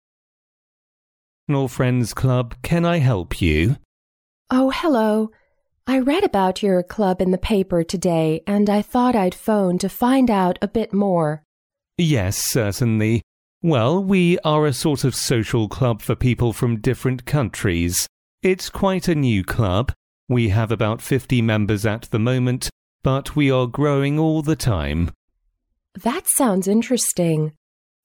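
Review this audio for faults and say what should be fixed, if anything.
Nothing to fix; the fade-in up to about 1.5 s is smooth and deliberate, with no click or hard edge.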